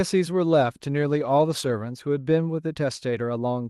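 A call bitrate drop runs from 0.49 s to about 2.09 s. The call's bandwidth estimate fell, so the Opus encoder was told to spend far fewer bits. The sound fits a fall from around 40 kbps to about 18 kbps, held at that floor for roughly 1.5 s. With fewer bits per frame, the speech is coded more coarsely and turns rough and watery. It then recovers toward the fuller 12 kHz band the call path normally carries.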